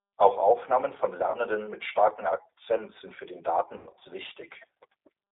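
Throughout, the sound has the slightly rough, synthetic texture of the G.729 codec. This low-rate speech coder rebuilds each 10 ms frame from a vocal tract filter, a pitch predictor and a few pulses, which fits an 8 kbit/s stream. The band runs only from about 300 Hz to 3.7 kHz. The damage is plainly audible, and it is steady rather than intermittent.

From 1.30 to 1.36 s, just before "mit starkem", VoIP packet loss concealed by the speech codec stretches the sound into a brief tail. The gap is about 40 ms, which fits two lost 20 ms packets. The decoder repeats its last pitch and filter at falling gain.

From 3.77 to 4.07 s, right after "sind für den", a heavier burst of the same concealment covers about 180 ms lost across 280 ms, with the longest run near 100 ms. Here the sound is stretched and fades, and stays weak briefly after the packets return, because each frame builds on the previous one.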